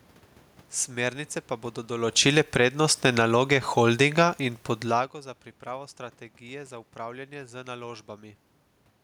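From 1.9 s to 4.22 s, after "pa bodo", the speech steadily sinks by about 10 dB, with the room noise behind it dropping by the same amount. That shared fall is the mark of automatic gain falling: the gain control found the input too loud, or its background noise too strong, and lowered its gain gradually over those two-odd seconds. By "in podlago za pripravo", the level has settled lower. The talker's movements near 2 s and 5 s only shift the voice, not the background.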